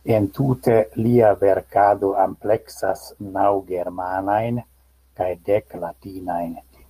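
No technical faults can be heard anywhere in the recording; the signal stays steady and intact throughout.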